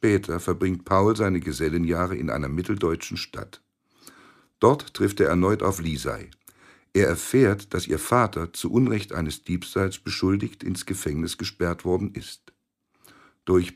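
No technical faults can be heard anywhere in this audio. Nothing in it calls for a fault to be flagged at any point.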